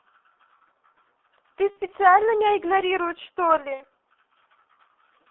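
From start to finish the speech sounds muffled and hoarse, squeezed into a band from 300 Hz to 3.5 kHz, with smeared, indistinct consonants. This is heavy G.723.1 codec damage. The slow-updating voice model and coarse 30 ms frames, at a rate that points to about 6.3 kbit/s, cannot follow quick articulation.

At 1.70 to 1.79 s, and again at 3.74 to 3.85 s, the speech stretches out and fades, then sounds weak for a moment afterwards. This is VoIP packet loss concealed by the speech codec, which fits about 60 ms, or two frames, going missing each time. The decoder extends its last pitch and filter at falling gain, and the following frames take a while to recover.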